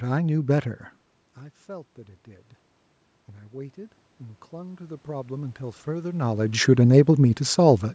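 From 3.48 s to 6.51 s there is automatic gain rising. The level reaching the microphone had fallen by about 18 dB, and the gain control answered by lifting its gain slowly. Over those three seconds it adds about 7 dB. Speech and room noise swell together, so the background creeps up along with the talker. The rise is smooth, not a jump. Near 6 s, while the gain is still rising, the talker moves relative to the microphone, and the level shifts again.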